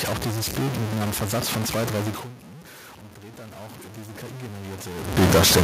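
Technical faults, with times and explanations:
Throughout: stuck bit. Grainy noise or buzzy distortion coats everything and fills the pauses with noise, likely from one data bit held fixed. The spectrogram shows broadband hash between syllables.
2.43–4.86 s, after "von zwei drei": automatic gain rising. After the input falls by about 19 dB, gain climbs gradually by about 10 dB. Voice and noise floor swell together in the waveform envelope.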